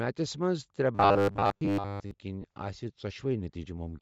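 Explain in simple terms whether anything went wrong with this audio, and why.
Throughout the speech there's a plainly audible breathy, grainy edge on the upper tones, and the sound lacks crispness. That points to Bluetooth LC3 compression, which likely thinned out the high frequencies and filled the gap with noise to save data.

From 0.95 to 2.11 s the speech turns into a stiff, metallic buzz pitched around 100 Hz. This is robotic sound from repeated short buffers. Audio likely arrived too slowly, so the player kept repeating roughly 10 ms slices while most of the real sound was skipped.

At 2.42 to 2.44 s there is a brief noisy smear lasting 20 ms. These are lost LE Audio frames, consistent with two 10 ms frames going missing. The decoder patched the gap by reusing the previous sound with its detail scrambled.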